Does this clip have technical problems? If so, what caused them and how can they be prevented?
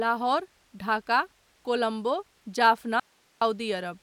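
Yes. Audio dropout to a faint residue, 3.00 to 3.41 s: the speech cuts out abruptly for 416 ms, leaving only hiss some 40 dB below it, likely from a break upstream while the later path stayed live. Secure connectors and cables, and monitor the input link so interruptions are caught and fixed before recording.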